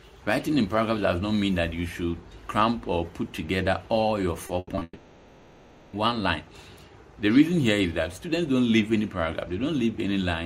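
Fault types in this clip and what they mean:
Repeated packet loss (robotic sound): From 4.47 to 4.83 s the sound turns choppy, broken by four short holes of up to 80 ms. Each lost or late packet is patched by stretching the preceding sound, about 140 ms in all, roughly two-fifths of that stretch.
Long network dropout: From 4.83 to 5.95 s the last sound carries on as a fading buzz or hiss, followed by about 30 ms of silence, and the audio resumes with that span missing. This is likely a network outage that lost about 1.1 s of audio.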